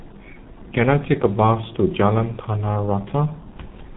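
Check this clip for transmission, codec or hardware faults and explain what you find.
One fault runs through the whole of this speech clip: heavy G.723.1 codec damage. The coder works in 30 ms frames and refreshes its model of the voice only slowly, so fast articulation smears. It discards everything above 4 kHz, leaving the speech muffled, hoarse and with blurred consonants, a degree of coarseness that fits the 6.3 kbit/s mode. A simple low-pass filter would dull the top end just as much but keep the voicing smooth. Here the roughness in the voice itself points to a low-rate speech coder.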